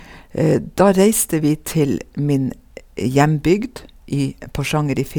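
No technical faults can be heard anywhere in the recording; the speech signal stays intact and continuous throughout.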